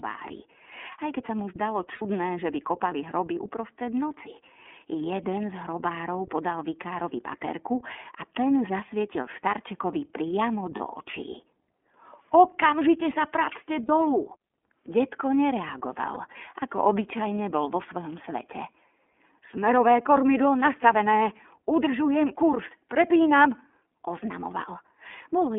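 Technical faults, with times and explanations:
Throughout: iLBC codec. The speech has been squeezed through a narrowband VoIP coder running at 13.33 kbps with 30 ms frames, and the damage is plainly audible. The line band sits at roughly 250 Hz to 3.4 kHz, so the lows are thin and the top end just stops. Each frame's excitation is coded on its own, which gives the voice that slightly rough, synthetic edge you get with this codec.
1.95 to 2.02 s, 10.77 to 10.81 s, 13.86 to 13.90 s, 16.13 to 16.18 s: lost iLBC frames. The first gap is about 60 ms long, which fits two missing frames, and the other three are about 30 ms each, one frame apiece. At each gap the decoder fills the hole by repeating the last pitch cycle with some noise mixed in, so you hear a brief held, buzzy vowel. Since iLBC frames don't depend on the ones before them, the speech comes back cleanly right after each gap.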